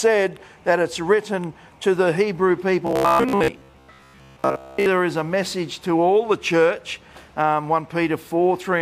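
From 2.87 to 4.86 s the audio turns into a rigid, metallic buzz at about 66.7 Hz: robotic sound from repeated short buffers. The likely cause is data arriving too seldom, so a 15 ms segment repeats and fills most of that stretch while fresh audio is skipped.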